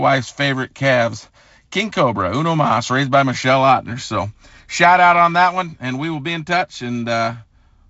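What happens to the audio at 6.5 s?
Nothing goes wrong at 6.5 s: the speech carries on intact through the G.722 wideband telephone coding, with its light upper-band hiss and nothing above about 7.7 kHz.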